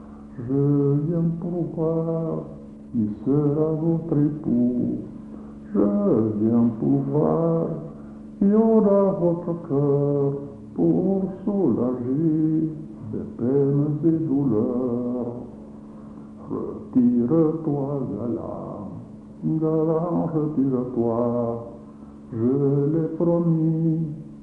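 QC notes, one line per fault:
Throughout: wrong sample rate. Everything plays slow and low, at about 0.73 times its proper speed and roughly 5.6 semitones flat, a little over a perfect fourth. Because the samples are read out slower than they were captured, with no conversion, tempo and pitch fall together by the same ratio. That ratio fits material recorded at 44.1 kHz and played back at 32 kHz.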